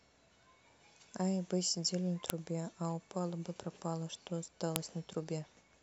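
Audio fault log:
2.30 s and 4.76 s, file header played as audio: there's a sharp, loud snap at each of these points in the speech, landing regardless of what's being said. It sounds like the clip was built from separate WAV pieces joined end to end without stripping their headers, so a few dozen bytes of header data get read as sample values. That burst of unrelated numbers lasts only a moment, which is why you hear a crisp click instead of a longer noise.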